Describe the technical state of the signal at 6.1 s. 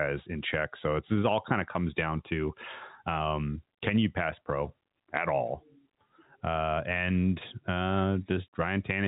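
At 6.1 s the speech is intact, with no fault at that moment, just the G.711 telephone coding path carrying it with nothing above about 3.8 kHz.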